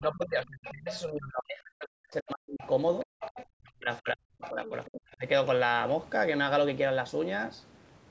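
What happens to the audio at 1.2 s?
At 1.2 s the speech is caught in speech suppressed in double talk, spanning 0 to 2.64 s. The level dips deeply, by roughly 40 dB at worst, likely because the echo canceller could not separate the talker from the overlapping far-end echo and attenuated both.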